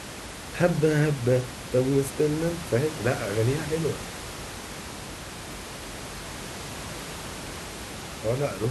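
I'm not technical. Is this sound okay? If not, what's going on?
Yes, nothing stood out on listening: the speech comes through as it should, with just some quiet background sound from the room behind it, which is normal for a recording.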